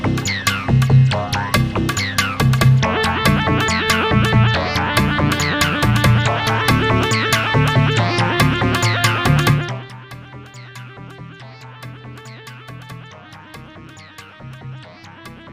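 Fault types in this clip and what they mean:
Zipper noise: Between 9.49 and 9.93 s the level drops by about 20 dB, but in discrete 1 dB jumps instead of a continuous slope. Each jump leaves a tiny click, and at around fifty steps a second those clicks merge into a buzzy ticking that rides on the sound only while the level is falling. A smooth fade would move just as far without any of that texture.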